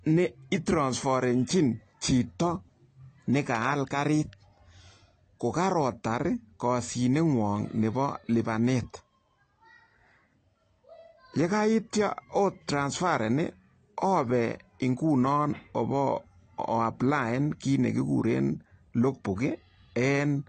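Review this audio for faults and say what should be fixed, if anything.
AAC compression, audible throughout the speech from start to end: nothing is present above 8.5 kHz, so the sound is dull, and sibilants and sustained sounds carry a warbling, fizzy smear. This is likely AAC-LC coding at a low bitrate, which fits around 32 kbps; the encoder lowers its cut-off and quantises the remaining bands coarsely, leaving spectral holes that shift from frame to frame. To prevent it, re-export from the original source at a higher AAC bitrate, or use a lossless format.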